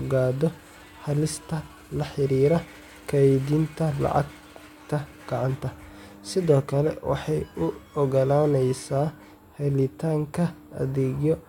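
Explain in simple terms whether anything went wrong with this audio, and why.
Nothing went wrong with the signal: the speech reaches the listener steady and intact, with no technical faults to be heard anywhere in the recording.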